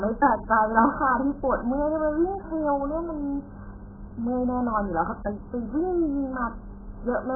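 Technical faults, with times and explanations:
Throughout, AAC compression: the speech has nothing above 1.8 kHz, so it sounds dull and muffled, with a smeared, warbly texture on vowels and sibilants. This heavy damage is likely AAC-LC squeezed very hard, and it fits a bitrate of around 8 kbps.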